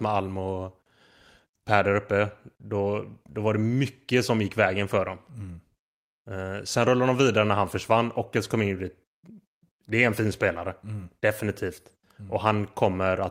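Nothing in the speech stood out as a technical problem on listening.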